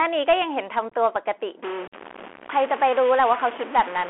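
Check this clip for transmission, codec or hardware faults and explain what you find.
Three faults are present: a narrowband Bluetooth headset codec throughout, two bursts of packet loss, and a stuck bit from mid-clip.

The whole clip carries Bluetooth CVSD headset codec damage. The band sits near 300 Hz to 3.4 kHz. A one-bit delta stream, consistent with 64 kbps CVSD, adds granular hiss and scratchy sibilants.

Unconcealed Bluetooth headset packet loss hits twice. From 0.90 to 0.94 s, about 26 ms drops out in scattered gaps, the longest near 19 ms, which suggests around seven lost packets. From 1.88 to 1.94 s, about 41 ms vanishes, consistent with roughly ten packets. Nothing fills the holes, so the speech cuts out abruptly.

From 1.63 s to the end, a distortion sits on the speech, and noise fills the quiet moments. This is likely a stuck bit, with one data bit held fixed and offsetting many sample values.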